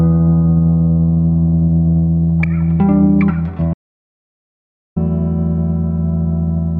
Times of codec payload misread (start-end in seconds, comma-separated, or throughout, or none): none